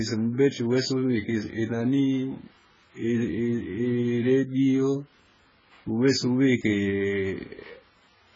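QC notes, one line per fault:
Throughout: AAC compression. Nothing is heard above 7.6 kHz, so the speech sounds dull and closed in. Sibilants turn fizzy and smeared. Sustained sounds warble. The damage is heavy. The likely cause is AAC-LC coding at a very low bitrate, which fits about 12 kbps. With so few bits per frame, the encoder drops the top band and starves the remaining bands. The thin, noisy spectrum gives the watery, swirling texture.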